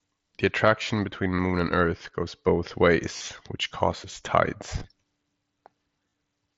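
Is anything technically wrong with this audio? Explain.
Yes. At 1.36–1.39 s, 3.17–3.28 s, 4.77–4.87 s and 6.09–6.12 s the speech briefly turns buzzy and tonal, then warbles as it returns. This is concealed Bluetooth headset packet loss: the receiver filled each missing packet by repeating the best-matching recent waveform. The middle two events are scattered bursts, with the longest gap 37.5 ms.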